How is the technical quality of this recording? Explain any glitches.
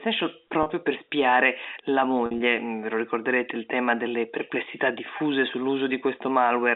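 There are three brief dropouts from packet loss with pitch repetition, over a narrowband telephone line. They hit at 0.63–0.66 s, right before "per spiare la"; at 2.26–2.40 s, after "per spiare la"; and at 5.18–5.20 s, after "il tema delle perplessità". Each time, missing audio was patched by looping the last pitch period, giving a short held buzz. The middle one is about 90 ms of gaps scattered over 140 ms, so it sounds choppier.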